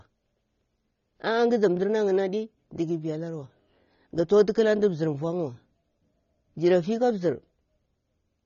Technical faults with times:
0.00-8.46 AAC compression

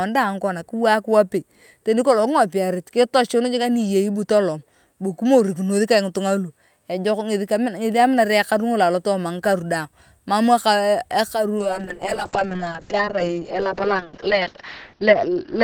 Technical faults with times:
11.58-15.64 call bitrate drop

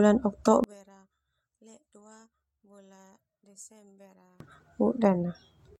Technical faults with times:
0.64-4.40 one channel inverted

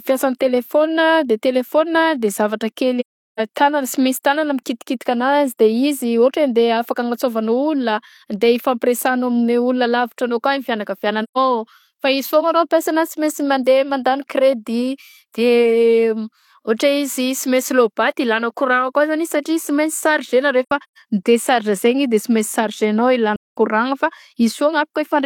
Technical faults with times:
3.00-3.40 AAC frame loss with muting
11.23-11.38 AAC frame loss with muting
20.63-20.98 AAC frame loss with muting
23.36-23.57 AAC frame loss with muting

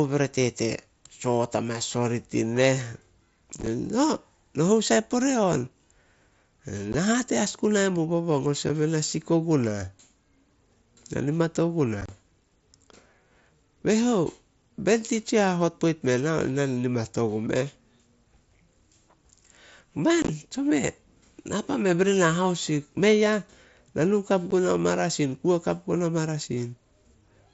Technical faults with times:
3.59-3.67 unconcealed Bluetooth headset packet loss
6.93 unconcealed Bluetooth headset packet loss
8.69 unconcealed Bluetooth headset packet loss
12.01-12.09 unconcealed Bluetooth headset packet loss
20.22-20.29 unconcealed Bluetooth headset packet loss
24.51 unconcealed Bluetooth headset packet loss

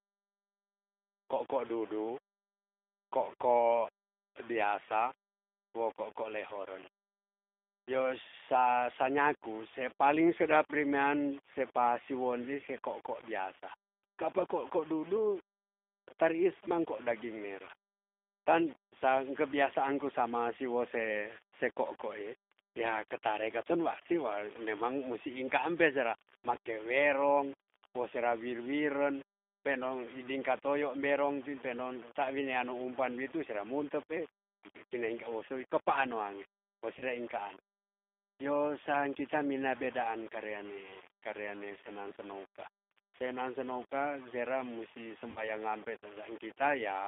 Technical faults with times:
0.00-47.08 low bit depth without dither
0.00-47.08 G.729 codec
34.08-34.14 VoIP packet loss concealed by the speech codec
36.99-37.03 VoIP packet loss concealed by the speech codec
45.30-45.49 VoIP packet loss concealed by the speech codec

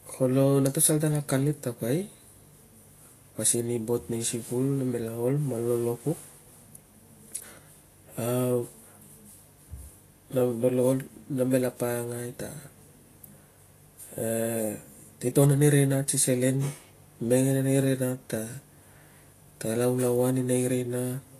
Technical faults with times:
0.00-21.39 Vorbis compression

